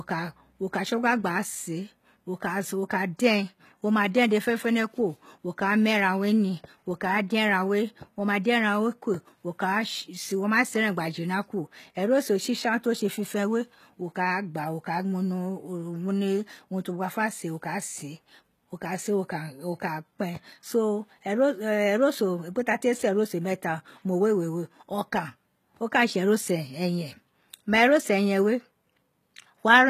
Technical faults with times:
0.00-29.89 HE-AAC compression

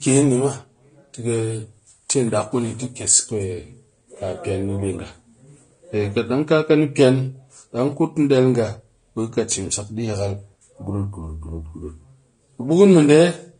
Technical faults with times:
0.00-13.60 AAC compression

